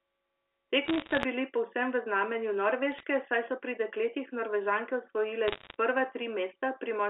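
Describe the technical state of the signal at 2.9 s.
Bit errors on a digital phone line begin at 2.92 s and run to 3.03 s. Roughly half a percent of bits flip on the G.711 line, each one corrupting a single sample. Hits on sign or high-order bits produce sharp ticks, heard as brief crackle over the speech.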